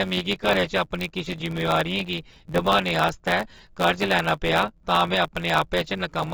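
From start to finish the speech sounds dull and smeared, with a warbling, fizzy edge on sibilants, which is likely AAC compression at a low bitrate. A spectrogram shows nothing above a lowered cut-off, a flat ceiling, with patchy, holed bands beneath it.

Also throughout, a block size mismatch (truncated) discards the tail of every block. This produces a steady 91.9 Hz buzz and makes the speech run 1.07 times fast at about normal pitch, which fits 512-sample blocks. The waveform shows regular splices at the buzz rate.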